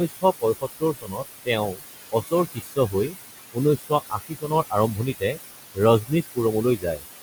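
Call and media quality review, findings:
Noise suppressor artifacts, whole clip: suppressor pulling steady-noise bands down about 17 dB frame by frame. Background drops away between phrases and returns under the speech. Room noise sits only about 9 dB below the speech. Component: noise suppression stage.

Speech cut by the noise suppressor, four spans: 0.08–3.15 s, 3.52–5.39 s, 5.75–6.38 s, 6.77–7.03 s. Suppressor misclassifying quiet speech as noise, dips up to about 21 dB in the first two spans, about 16 dB in the last two. Soft consonants and word tails sound swallowed. Roughly a second lost in the first span, about half a second in the second, brief fragments in the rest.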